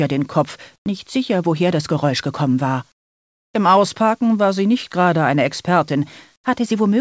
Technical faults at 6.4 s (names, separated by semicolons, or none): comfort noise in place of the background